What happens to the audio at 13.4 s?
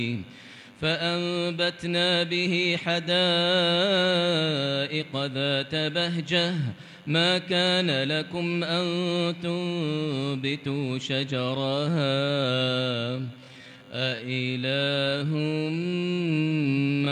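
At 13.4 s the audio sits inside a time-stretched section running from 11.56 s to the end. It plays at about 0.56 times normal speed. The pace drags while pitch holds, likely from software repeating short pieces to lengthen it.

A DECT cordless phone buzz also runs throughout. Its radio bursts every 10 ms get rectified, giving a steady, thin 100 Hz buzz roughly 30 dB below the sound.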